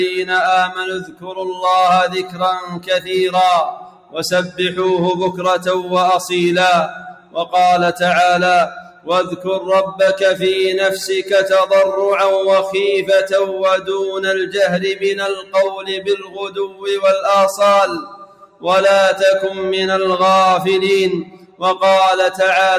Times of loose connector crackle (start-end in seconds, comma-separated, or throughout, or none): none